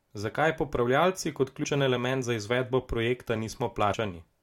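Damaged data in a compressed stream appears at 1.63 s and again at 3.93 s in this speech. Each time, corrupted bytes leave the decoder misreading a frame and losing sync until it finds the next frame header, producing a short glitch heard as a chirp, squawk, click or brief hole.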